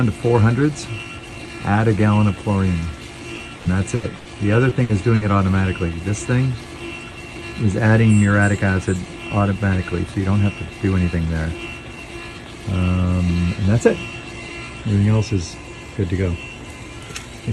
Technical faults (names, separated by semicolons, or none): repeated packet loss (robotic sound); short concealed packet loss; burst of packet loss